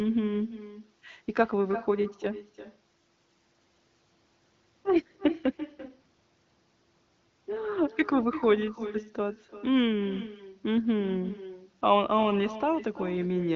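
Echo with no canceller runs through the whole of this speech recording: every phrase is trailed, roughly a third of a second later, by a thinner copy sitting about 15 dB below the direct sound. The far end is playing the call through a loudspeaker, its microphone picks that playback back up, and nothing subtracts it, so the talker's own voice returns after the network round trip. The band-limited AMR wideband (HD Voice) sound, with nothing above about 7.4 kHz, carries the echo along with it.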